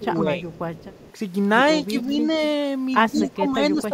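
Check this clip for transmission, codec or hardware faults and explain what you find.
Two faults show up in this speech: repeated dips in the talker's level and a delayed copy of the voice.

Speech suppressed in double talk occurs from 0.0 to 0.55 s, 1.9 to 2.16 s and 3.1 s to the end. The voice sinks by roughly 10, 5 and 15 dB. The likely cause is an echo canceller that, with both sides talking, could not tell near speech from loudspeaker echo and attenuated everything. On a waveform the envelope visibly pinches, and the spectrogram thins and fades across all bands.

Echo leak appears at 0.51 to 0.59 s, 0.75 to 1.13 s and 3.16 to 3.31 s. A copy of the speech trails it by 135 ms, about 25 dB down at first and only about 5 dB down in the last burst. This is likely a far-end loudspeaker echo the canceller failed to remove. On a spectrogram, repeated formant patterns appear shifted 135 ms to the right.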